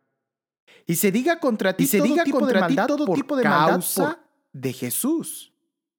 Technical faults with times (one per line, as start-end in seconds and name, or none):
1.79-4.13 doubled audio track